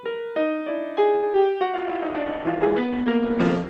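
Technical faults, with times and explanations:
1.15–1.25 s, short stall from a late packet: a packet arrived late and the jitter buffer ran dry, so the receiver held the last sound for about 73 ms before resuming from the same point. Nothing is lost, but the sound drags briefly and the stream ends up about 73 ms later.
1.33–1.36 s, short concealed packet loss: about 20 ms of audio never reached the decoder in time. The receiver bridged the gap by extending the preceding sound, then crossfaded back into real audio, giving a brief smear or wobble where that material is missing.
1.79–3.69 s, call bitrate drop: the bandwidth estimate fell and the encoder went from 96 to 12 kbps, staying at the bottom for about 1.5 s. Coarser coding makes the sound rough and watery, and the audio band narrows from 20 kHz to 8 kHz, so it turns muffled.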